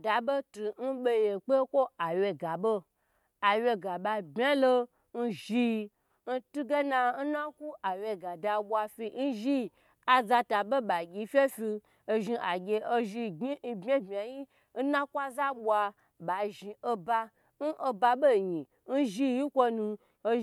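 Nothing in the speech recording stood out as a technical problem on listening.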